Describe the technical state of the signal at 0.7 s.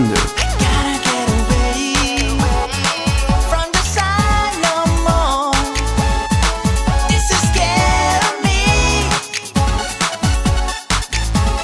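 At 0.7 s the signal is intact, with no dropout, distortion, glitch or other fault to be heard at that moment.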